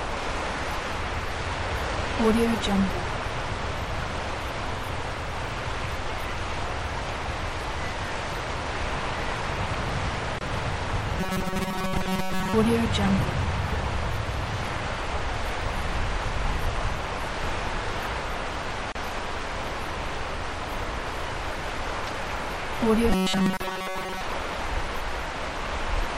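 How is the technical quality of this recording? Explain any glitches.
The recording has audible faults: lossy coding across the whole clip, three short dropouts, and two stretches of metallic buzz.

MP3 compression: Throughout, a likely tight bit budget, around 64 kbps, makes the encoder cut treble and drop weak detail, giving a watery, swirly sound with smeared attacks.

Gap at a join of encoded pieces: Separately encoded segments were joined untrimmed, leaving encoder delay and padding in. The sound cuts out at 10.39 s for 25 ms, at 18.92 s for 32 ms and at 23.57 s for 33 ms, then resumes where it stopped.

Robotic sound from repeated short buffers: From 11.20 to 12.54 s and 23.10 to 24.21 s, audio likely arrived too slowly, so roughly 5 ms chunks were repeated over most of the sound. This imposes a rigid 188 Hz metallic buzz.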